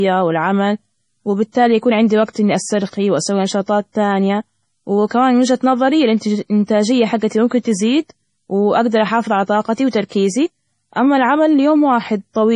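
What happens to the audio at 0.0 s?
A switching supply whistle runs from 0.0 s throughout: a switching supply running in audible burst mode or beating with another leaves a thin tone drifting between 11.1 and 11.3 kHz, roughly 30 dB below the speech. From 0.0 s the audio also sounds watery and swirly, with nothing above 10.4 kHz. This is likely MP3 compression at a low bitrate, which cuts the treble and switches weak frequency lines on and off.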